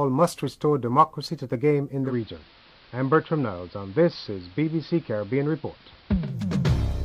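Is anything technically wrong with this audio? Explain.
Yes. From 2.03 to 6.37 s the sound shows digital radio blending to analogue: the receiver lost its digital signal and cross-faded over about 118 ms to the station's AM broadcast, then faded back. During that stretch the level drops by about 1 dB, and a hiss sits roughly 30 dB under the programme. A plain low-pass filter would not bring that hiss or the smooth fades at both ends.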